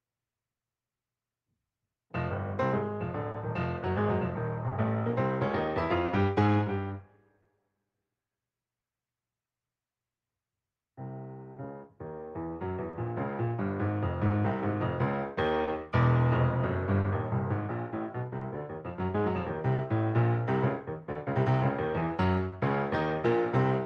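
Small timing hiccups recur at uneven intervals across the whole clip, with brief stretched or repeated fragments. This is clock drift between sender and receiver: the sender's clock runs roughly 2% slow, so the receiver's buffer keeps draining and must be padded.

From 0.57 s to 22.54 s come scattered short gaps, around fifteen brief ticks and smears, the longest near 30 ms. Lost or late packets left small holes, each patched by extending the preceding sound, about half a second concealed in total.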